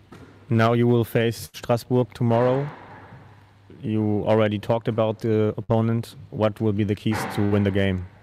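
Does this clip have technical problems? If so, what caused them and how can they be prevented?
Yes, there's a burst of packet loss at 1.45 to 1.55 s, 5.63 to 5.71 s and 7.45 to 7.53 s. Each time the receiver stretches the last bit of sound and fades it before jumping ahead, skipping about 80, 60 and 60 ms. More jitter buffering or forward error correction would cover it.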